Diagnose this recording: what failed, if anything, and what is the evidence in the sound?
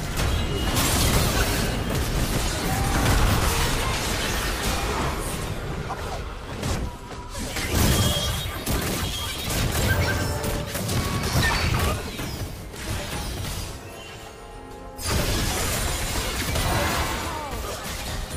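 Four tiny skips break the sound at 0.82, 4.77, 10.75 and 12.74 s, where a sliver of audio vanishes and the waveform jumps abruptly from one point to a later one. The missing stretches last about 5, 5, 15 and 19 ms. This is overlap between stream segments at the network and playback stage. Adjacent segments carried time stamps that overlapped, so the player trimmed the overlap as though the audio were duplicated, discarding material that was never actually doubled. The spacing of the skips fits 2-second segments.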